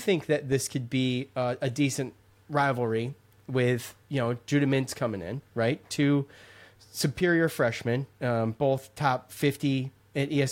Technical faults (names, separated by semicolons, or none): none